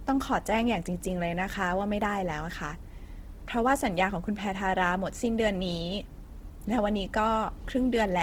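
Throughout this speech clip the sound is grainy and rough, with a noisy texture in place of clean detail, though the top end still reaches about 20.2 kHz. This is likely Opus compression in its fullband music mode, filling starved bands with noise, which fits a low bitrate near 16 kbps.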